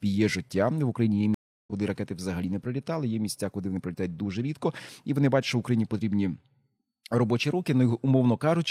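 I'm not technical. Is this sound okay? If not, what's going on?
No. At 1.34 s the speech cuts out for a third of a second and jumps ahead to "ракети взагалі не прилітали". This is a stream reconnect after a dropped connection.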